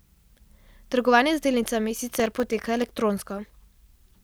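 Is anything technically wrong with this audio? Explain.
Yes. From 2.20 to 2.91 s the speech has processor overload crackle. The processor fell behind its deadlines for very short audio buffers, which sound like roughly a millisecond and a half each, and missed around twenty of them in that stretch. Each miss repeated a sliver of old audio with hard edges. Those repeats add up to a gritty, tearing crackle laid over the speech that stops once the load passes.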